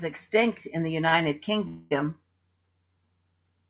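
A short stall from a late packet comes at 1.09 to 1.14 s, just after "extinct in the". A packet missed its playout slot, the jitter buffer emptied, and the receiver held the last sound for about 31 ms until the packet turned up, then resumed from the same point. Nothing is lost; the sound simply lingers a fraction too long with a faint buzzy sustain, and everything after it plays 31 ms later.

A call audio freeze follows at 1.68 to 1.93 s, most likely because packets were held up in transit long enough to drain the jitter buffer. For about 230 ms the receiver kept extending the last sound as a buzzy, fading fill. It never drops to silence, so the freeze is heard as a smeared hold rather than a dropout. Playback then picks up where it stopped, adding a 230 ms gap without removing anything, over the narrow call-codec band that carries nothing above 4 kHz.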